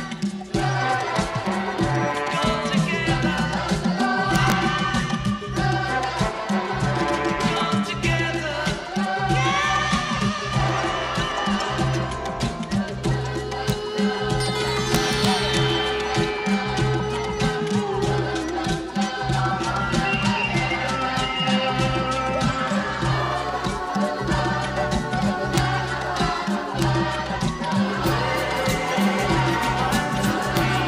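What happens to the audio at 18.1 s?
Nothing goes wrong at 18.1 s; the audio runs through that moment intact, with no dropout, click or distortion.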